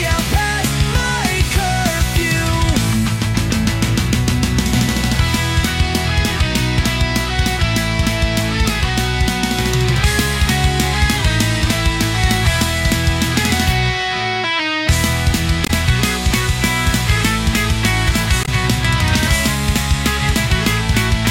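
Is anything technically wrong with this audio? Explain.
Yes. There is damaged data in the compressed stream at 15.64 to 15.70 s and again at 18.42 to 18.49 s. Corrupted bytes leave the decoder misreading those frames and losing sync until it finds the next valid header, producing a brief chirp or blip of roughly 60 ms each time.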